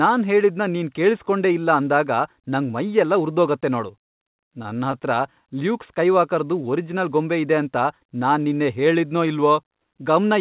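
From 3.92 to 5.06 s, repeated stalls (stutter): the jitter buffer ran dry fourteen times, the receiver stretching held sound over gaps up to 50 ms, so the audio drags and hiccups.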